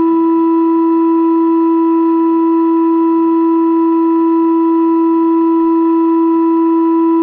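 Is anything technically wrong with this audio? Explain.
No, nothing is technically wrong with this music.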